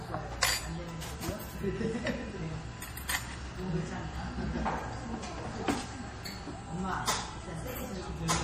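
Throughout, MP3 compression is the likely cause: nothing above 15.4 kHz, and a watery, swirling texture where weak components flicker frame to frame, unlike a steady low-pass filter.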